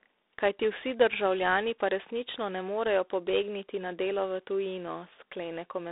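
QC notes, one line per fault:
Throughout: G.726 ADPCM. The speech is confined to a telephone band of about 300 Hz to 3.7 kHz, with nothing above 3.8 kHz. A harsh, rasping hiss rises and falls with the speech level, consistent with 24 kbit/s coding. Steady line noise would not follow the speech this way.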